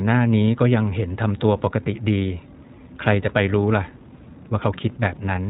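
Speech coded with iLBC throughout: nothing above 4 kHz survives, and the plainly rough, slightly synthetic texture fits 20 ms frames at about 15.2 kbps.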